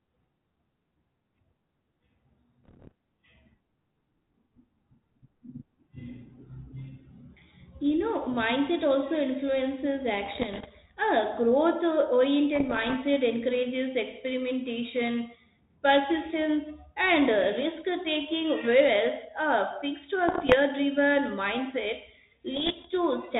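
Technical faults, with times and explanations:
2.64–2.92 s, 10.26–10.68 s, 12.53–12.95 s, 20.28–20.55 s, 22.54–22.87 s: bit errors on an ADPCM link. Pops, rasping bursts and brief level jumps break into the 32 kbit/s G.726 speech. Around one bit in a hundred arrives flipped, and each flip knocks the decoder's step size and predictor off track, so every error smears on for several milliseconds.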